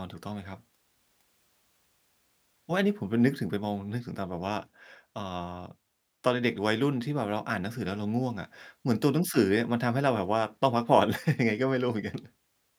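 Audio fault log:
Nothing in this speech recording registers as a fault. There is nothing to list for any part of it.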